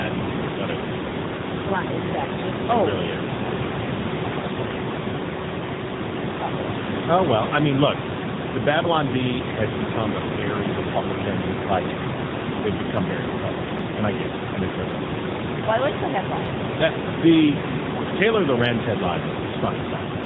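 Speech passed through an AMR narrowband mobile codec for the whole clip, at a low mode whose plainly audible damage fits a bitrate near 8 kbps. The codec rebuilds the voice from a coarse vocal-tract model and a few pulses per frame, with nothing above 4 kHz. That leaves a muffled, buzzy, synthetic timbre, heard alongside room noise about 5 dB below the speech.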